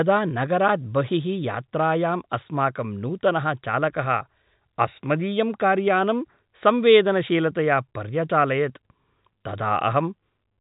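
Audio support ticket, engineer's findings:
No faults found; telephone band tops out near 3.8 kHz.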